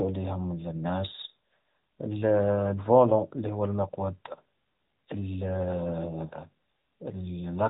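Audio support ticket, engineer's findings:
Speech path encoded with AMR narrowband mobile codec throughout: 8 kHz sampling, nothing above 4 kHz, pulse-driven vocal-tract model plainly audible as buzzy, synthetic voice; fits a mid-rate mode near 10 kbps.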